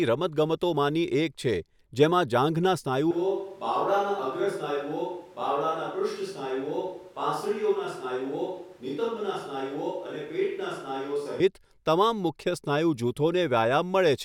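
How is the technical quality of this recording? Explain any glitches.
The recording has one clear fault, a switch to a distant microphone running from 3.11 s to 11.40 s. At 3.11 s the speech abruptly turns roomy and hollow, loses bass, drops by roughly 5 dB, and sits over background noise only about 30 dB below it. The likely cause is that the close microphone's signal dropped out and a more distant pickup, such as a camera microphone, carried the speech. That pickup captures more room reflection and ambient noise. At 11.40 s the close sound returns just as suddenly.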